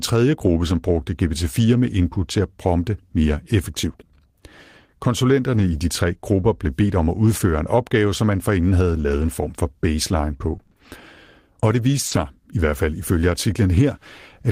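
At 5.53 to 5.67 s, a lost packet rebuilt from error correction. Low-bitrate backup copies fill about 80 ms, so the speech turns briefly rough and noisy.

From 8.97 to 12.17 s come scattered short gaps. Around seven small holes are patched by extending prior sound. The longest is about 40 ms, heard as ticks and hiccups.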